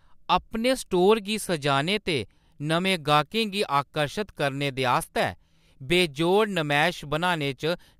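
From 2.86 s to the end of the speech, the converter's sampling clock wanders, so each sample is captured a few microseconds early or late at random. Because the resulting error scales with how steeply the waveform is changing, this sample clock jitter leaves a hiss-like roughness roughly 30 dB below the signal that swells on loud and bright passages, sibilants especially, and drops away in the pauses.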